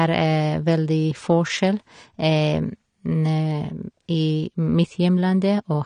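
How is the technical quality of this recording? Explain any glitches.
The speech sounds dull and smeared from start to finish, with nothing above about 9.7 kHz and a warbling, fizzy texture on sibilants and held sounds. That points to AAC compression, most likely AAC-LC at a low bitrate around 32 kbps: the encoder drops the top band and coarsely quantises what remains against a hearing model, leaving gaps and swirling artefacts in the spectrum.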